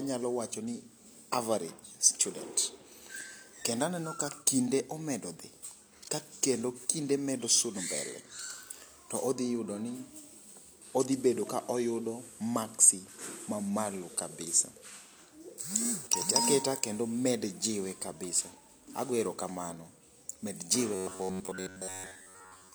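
From 10.71 to 15.20 s the speech shows a digital radio blending to analogue FM, each crossfade taking about 230 ms. Hiss rises to about 30 dB below the speech, while loudness stays level. That steady hiss marks it as a handover, not a dropout.

From 20.95 s to the end there is robotic sound from repeated short buffers. The speech turns into a rigid metallic buzz locked at 93.8 Hz, most likely from a roughly 10.7 ms chunk being replayed for most of that stretch while fresh audio is skipped. The fixed pitch sets it apart from ordinary codec warble.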